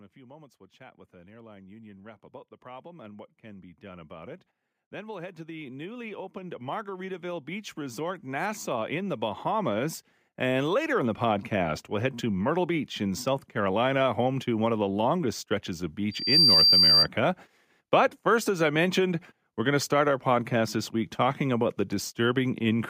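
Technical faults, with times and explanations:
0.13 to 11.49 s, automatic gain rising: the automatic gain control judged the incoming level too low and kept turning its gain up, by about 24 dB in total across more than eleven seconds. Because the boost is applied to the whole signal rather than just the speech, the talker and the room noise behind them grow louder together in a slow, continuous swell, with the background becoming steadily louder as the climb goes on.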